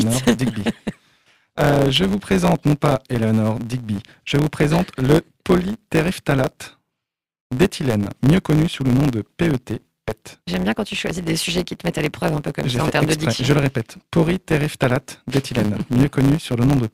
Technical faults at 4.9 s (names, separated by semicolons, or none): block size mismatch (truncated)